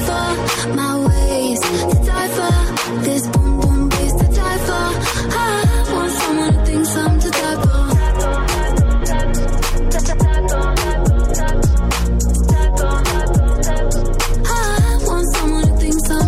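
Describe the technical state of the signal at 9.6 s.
At 9.6 s the signal is intact, with no dropout, distortion, glitch or other fault audible at that point.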